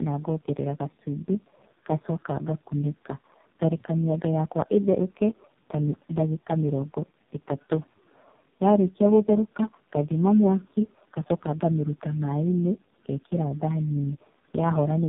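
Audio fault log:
Throughout: tandem speech coding, three speech codecs in a row; repeated decode and re-encode compounds damage, leaving rough, muffled, warbly speech with nothing above 3.8 kHz.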